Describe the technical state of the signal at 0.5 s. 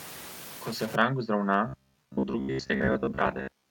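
At 0.5 s you're right in the middle of a stuck bit stretch, which runs from the start of the clip to about 0.96 s. The speech picks up distortion, and the quieter moments fill with a hiss-like noise floor instead of going clean. That points to one data bit likely being frozen high or low, so roughly half the samples get pushed off by that bit's fixed amount, following the waveform's shape.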